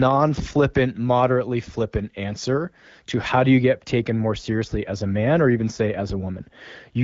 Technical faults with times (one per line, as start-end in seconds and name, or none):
3.29-7.04 de-emphasis applied wrongly